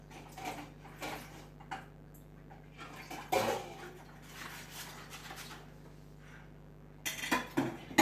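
Mains buzz runs throughout: switching spikes locked to the 50 Hz supply add a raspy harmonic buzz about 15 dB below the sound itself.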